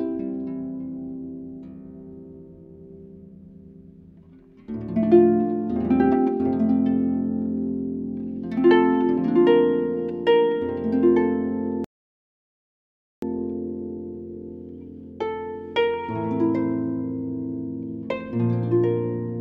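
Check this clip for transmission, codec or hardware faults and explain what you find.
One fault: a rebuffering stall. At 11.84 s the sound cuts to silence until 13.23 s, because playback ran dry of downloaded audio and waited for more. Unlike a dropout, it resumes exactly where it stopped, so nothing is lost, only about 1.38 s added.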